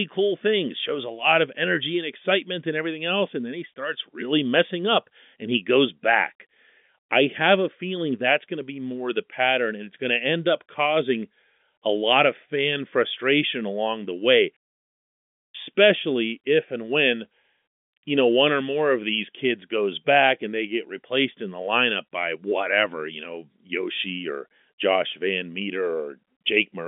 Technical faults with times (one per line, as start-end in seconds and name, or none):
none